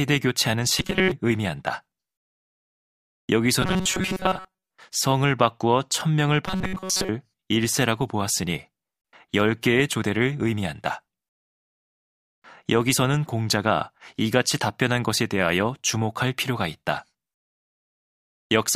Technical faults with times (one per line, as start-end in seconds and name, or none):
0.78-1.12 robotic sound from repeated short buffers
3.62-4.70 robotic sound from repeated short buffers
6.46-7.09 robotic sound from repeated short buffers